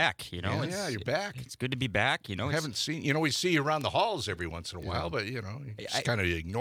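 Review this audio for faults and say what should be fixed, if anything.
Bit error spikes at 3.11, 3.81, 4.83 and 6.02 s: flipped bits jump the value and snap back, each a sharp tick that appears as a needle on the waveform and a full-height vertical line on the spectrogram. Use error-checked memory and links, such as ECC or CRC, to prevent them.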